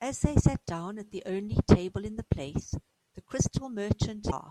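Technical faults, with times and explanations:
4.27 to 4.33 s, damaged data in a compressed stream: near the very end of this speech clip, a short glitch of about 56 ms cuts in. Corrupted bytes there made the decoder misread those frames, lose sync and hunt for the next valid header, so the sound glitches briefly before carrying on.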